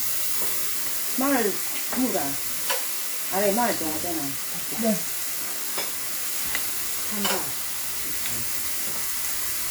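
From start to finish the everyday sounds have a swirly, smeared and hollow quality, with transients blurred rather than crisp, more degraded than a single lossy pass would leave them, though content still reaches up to about 20.1 kHz. This points to generation loss: the audio was likely decoded and re-encoded around four times through a WMA-style codec at roughly 96 kbit/s, each pass requantising on a fresh frame grid so that noise and spectral gaps accumulate.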